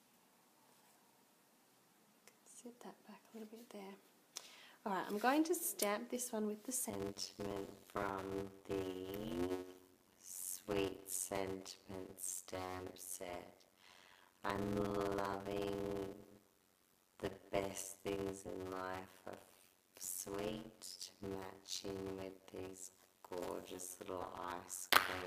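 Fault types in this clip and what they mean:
Block size mismatch (padded): from 6.9 s, zero-filled gaps in every block make a 91.9 Hz buzz and slow the audio to 0.533 speed at unchanged timbre. The waveform shows regular flat gaps, and the spectrogram shows evenly spaced vertical stripes.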